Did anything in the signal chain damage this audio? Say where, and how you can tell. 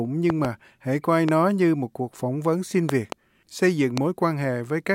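Yes, loud pops, likely from a voltage step in the analogue wiring or a switch. Six pops sit about 15 dB above the speech: pairs at 0.30–0.47 s and 2.89–3.14 s, singles at 1.29–1.31 s and 3.97–4.00 s. The speech continues underneath. Each shows as a narrow waveform spike and a full-height vertical spectrogram stripe.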